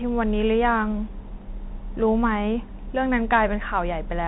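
Bluetooth CVSD headset codec damage runs through the whole speech clip and is plainly audible. Nothing above about 3.9 kHz survives, which fits a 64 kbps CVSD link. CVSD sends a single up-or-down bit per sample and adapts its step size, so loud, bright passages outrun the step and distort. S sounds come through scratchy, and a granular hiss sits beneath the speech from start to finish.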